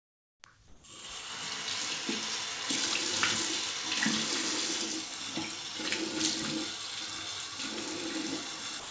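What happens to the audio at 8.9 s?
From 8.80 s to the end, about 110 ms of sound is dropped by the voice detector, likely judged as background, and replaced by steady comfort noise.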